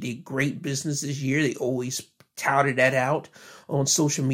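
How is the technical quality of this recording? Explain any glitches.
No glitches can be heard anywhere in the recording. There is nothing in it that calls for an explanation.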